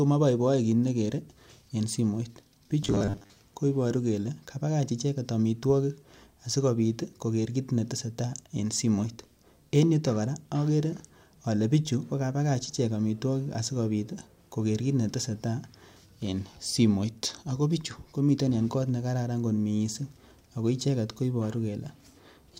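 Between 2.83 and 3.39 s the system's playback path was likely starved of new audio, so it kept replaying the last short buffer while the incoming speech went missing. That gives robotic sound from repeated short buffers. The repeats fall at a steady 100 Hz, which fits a buffer of about 10 ms, and roughly half of the stretch is recycled material. The speech turns into a flat, metallic buzz at that rate, still loosely tracking the syllables.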